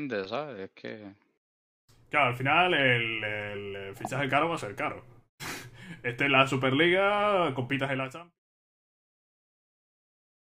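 No technical faults can be heard in the signal, and the smooth fade-out that begins around seven and a half seconds and ends at about 8.4 s is a deliberate edit rather than a defect.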